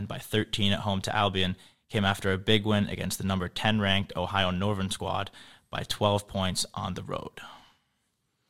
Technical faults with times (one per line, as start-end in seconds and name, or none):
none